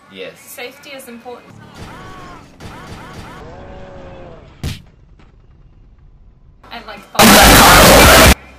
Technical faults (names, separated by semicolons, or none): signed and unsigned mixed up